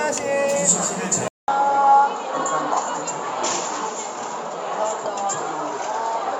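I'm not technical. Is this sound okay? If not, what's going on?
No. From 1.28 seconds to the end, the sound turns duller and boxier, losing everything above about 7.6 kHz, after a brief 0.2-second gap. Loudness stays about the same, with a faint new background noise. The likely cause is an input switched to a poorer device partway through.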